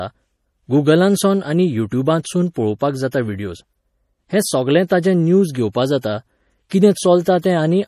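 Across the whole speech clip the treble stops dead at 15 kHz, and the sound has a watery, swirling quality, with sibilants turning metallic and chirpy. This is most likely MP3 compression at a bitrate low enough to fit roughly 40 kbps. Starved of bits, the encoder drops weak frequency lines that flicker on and off between frames. A plain low-pass filter would dull the top end but leave the remaining sound steady, without this churning.

Pre-echo then appears as a short hiss just before sharp onsets at 2.23 s and 3.11 s, from 4.88 to 4.91 s, from 6.01 to 6.04 s, and at 6.69 s. It spans about 16 to 30 ms, and each following attack sounds softened. The codec spreads quantisation noise evenly over its block, so noise sized for the loud onset leaks into the quiet moment before it. Unlike reverb or an echo, this noise comes before the sound rather than after it.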